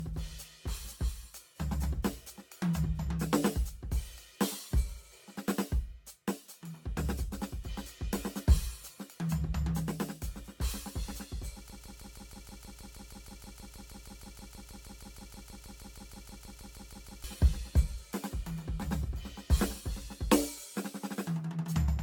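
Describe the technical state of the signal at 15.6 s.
At 15.6 s you're right in the middle of a broken-record loop that runs from about 11.70 s to 17.24 s. A 158 ms slice of the music repeats back to back, roughly 35 times, which likely means the player or stream stalled and kept resending its last fragment. Whatever should have played in that stretch is gone.

Under that, the whole clip carries generation loss, likely from being re-encoded around seven times with a lossy AAC codec at something near 96 kbit/s. Each pass re-quantised on a shifted frame grid, so the looped fragment sounds swirly, hollow and smeared, with soft attacks and nothing above 17 kHz.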